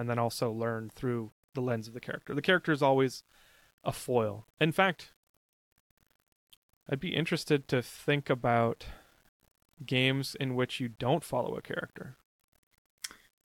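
Low bit depth without dither runs through the whole speech clip, from start to finish. The grain sits only about 40 dB below the signal, which fits samples likely rounded to around 9 bits with no dither added. Because the rounding error tracks the waveform instead of forming a steady noise floor, quiet syllables and decaying word endings turn rough and gritty, and the softest passages sputter between adjacent steps or drop out entirely.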